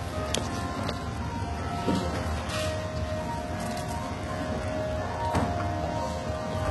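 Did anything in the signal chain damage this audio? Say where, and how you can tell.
Yes, at the codec stage: treble throughout sounds gritty and metallic and stops dead above 11.8 kHz, likely HE-AAC compression rebuilding highs by band replication, which fits roughly 16 kbps.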